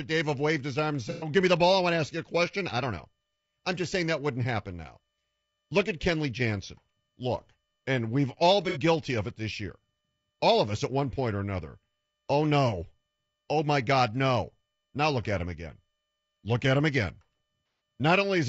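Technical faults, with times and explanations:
Throughout: low-delay AAC compression. The speech has a rough, grainy texture, with noise filling the gaps between harmonics and a top band that sounds thin and synthetic. This plainly audible damage is likely from AAC-ELD at a bitrate that fits about 32 kbps. Its short frames can't separate pitch harmonics cleanly and leave few bits for each one. On a spectrogram the harmonic stripes look smeared, with speckled noise between them and a patchy, blocky upper band.
1.10–1.30 s, 8.69–8.78 s, 17.66–17.81 s: AAC frame loss with concealment. Short runs of frames went missing. The decoder filled the gaps by reusing the last good spectrum. The first gap, after "waved his arm and" and before "give me the ball", lasts about 120 ms. The second falls after "and we've all" and before "guilty of it this". The last follows "at him again" and is the longest, about 150 ms. 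Each sounds like a smeared, noisy or phasey patch rather than silence. On a spectrogram the harmonics freeze into a flat, noisy smear. In the waveform the envelope goes oddly steady for the span.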